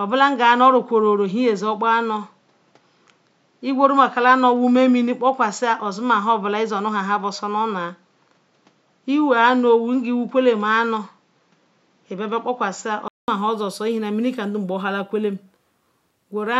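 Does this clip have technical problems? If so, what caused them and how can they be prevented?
Yes. An input switched to a poorer device runs from 0.0 to 13.28 s. For that stretch the speech has nothing above 7.6 kHz and sounds duller and boxier, then opens up after a gap of about 200 ms at 13.28 s. The loudness barely changes, and the device's own background noise sits far below the speech. The likely cause is the system recording from a lower-bandwidth microphone or headset call profile before moving to the better input. Lock the intended microphone as the recording input before starting.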